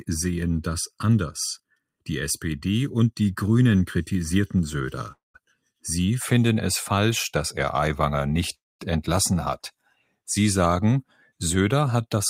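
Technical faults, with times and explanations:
0.00–6.21 s channel delay (comb filtering): one channel lags by under a millisecond. Summing to mono cuts fixed notches from around 700 Hz upward, so the sound is hollow, steady and unswept, not a moving phaser.
5.12–5.36 s and 8.54–8.81 s call audio freeze: the sound stalls for 221 ms, fading to silence after a brief tail, then again for 251 ms. The likely cause is a jitter buffer running empty. Playback resumes where it stopped with nothing lost, unlike a dropout that skips material.
9.80–10.19 s and 11.07–11.40 s sound cut by the noise suppressor: steady and decaying sound sinks by about 22 dB, then about 19 dB, while sudden onsets pass, unlike an overall level dip.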